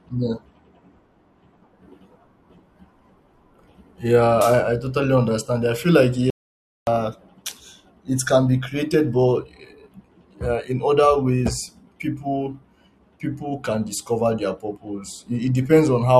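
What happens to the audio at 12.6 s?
At 12.6 s the speech carries on cleanly, with no dropout, click, distortion or other fault at that moment.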